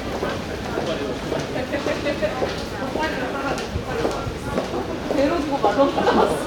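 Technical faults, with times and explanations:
No technical faults are heard in this clip.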